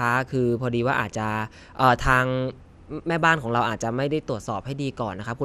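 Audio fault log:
Throughout, MP2 compression: the speech sounds dull, with a gurgling, grainy edge and nothing above 14.3 kHz. It's likely an MPEG Layer II encode short of bits, shutting off upper sub-bands and coarsely quantising the rest, which fits a rate around 80 kbps.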